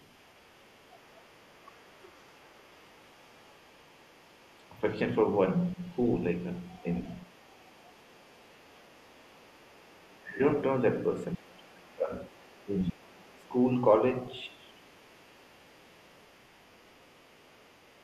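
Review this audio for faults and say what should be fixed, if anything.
Other side's voice leaking through, faint and well below the speech, at 0 to 4.73 s, 5.33 to 10.1 s and 11.34 s to the end. It is likely residual loudspeaker echo, visible on a spectrogram as a weak second set of harmonics under the main speech. Better acoustic echo cancellation, a headset, or lower loudspeaker volume would prevent it.

Speech suppressed in double talk at 5.74 s, 6.83 to 7.31 s, 9.99 to 10.42 s and 11.34 to 13.53 s, ranging from brief shallow dips to deep cuts. This is likely the echo canceller turning down both sides while they overlap, seen on the waveform as sudden envelope holes and on a spectrogram as gaps with a dulled high end. A canceller with more robust double-talk detection would keep the near talker intact.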